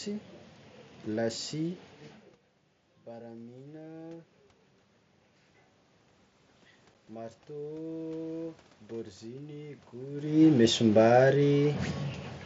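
A speech recording carried over a wideband mSBC Bluetooth headset link, with room noise throughout and energy stopping near 8 kHz. At 6.94 s there is one unconcealed Bluetooth headset packet loss: a single 7.5 ms voice packet dropped and silence or an idle pattern took its place, so a tiny hole with sharp edges can click. A waveform shows a brief flat gap, and a spectrogram shows a thin vertical blank stripe. From 9.21 s to 10.76 s the automatic gain is rising, lifting voice and background noise together by about 3 dB. The waveform envelope and the spectrogram's noise floor both brighten gradually over that span, not at one point. The talker also shifts position at around 10 s.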